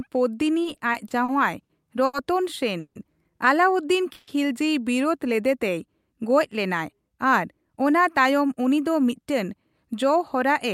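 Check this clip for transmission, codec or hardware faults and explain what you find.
Three kinds of network timing fault can be heard in the speech.

Repeated stalls (stutter), 0.63 to 2.15 s: packets arrived too slowly, emptying the jitter buffer seven times. About 240 ms of extended sound fills these gaps, the longest 80 ms, so the speech drags and stutters without losing anything.

Call audio freeze, 2.79 to 2.97 s and 4.13 to 4.29 s: the sound holds and buzzes for 160 ms, then 140 ms, the first ending in 70 ms of silence. The likely cause is delayed packets emptying the jitter buffer. Speech resumes where it stopped, so nothing is missing.

Jitter buffer speed-up, 6.34 to 9.45 s: to cut excess buffered delay, the receiver trimmed pitch-period slices, about a fifth of a second in total. The speech runs 8% faster at unchanged pitch and sounds hurried.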